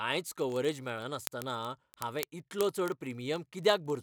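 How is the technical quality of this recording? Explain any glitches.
The recording is marred by a continuous fault: word clock ticks run through the speech from about 0.10 s to the end. A rapid ticking of uneven strength, roughly fifty per second, runs with the speech, around two hundred ticks in all. The receiving device was running on its own clock rather than locking to the sender's, with the two differing by roughly 0.1 percent. Each time they slip past each other, which here is about every 20 ms, a single sample is dropped or repeated, leaving a tiny discontinuity that is heard as a tick.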